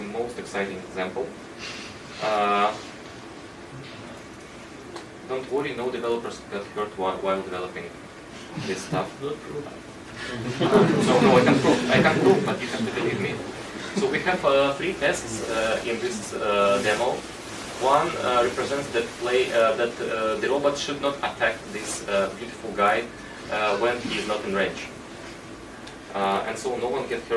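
Throughout, the resampler restarts on every block, roughly every 20 ms, giving a 50 Hz buzz under the sound, consistent with a 48 kHz to 24 kHz conversion.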